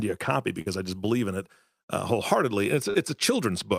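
At 0.61 to 0.68 s there is a burst of packet loss. Several consecutive packets failed to arrive in time, so the receiver extended the last sound for about 47 ms and let it decay, which comes across as the last sound held and fading out. When the speech resumes, about 40 ms of it is simply missing. That decay of a held sound followed by a jump forward separates it from a smoothed-over glitch.

At 2.90 to 2.96 s there is a short concealed packet loss. The decoder bridged the gap by continuing the preceding sound for about 40 ms and then blending back into the real signal. The result is a brief smear or wobble rather than a sustained buzz, and the roughly 40 ms of missing speech is lost inside the patch instead of leaving an audible skip.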